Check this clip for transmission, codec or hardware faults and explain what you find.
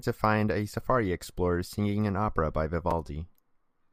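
One fault: chunks out of order at 2.91 s. A 5.33 ms block played one chunk late, giving a brief jumbled moment, with waveform steps and thin vertical spectrogram lines at three joins.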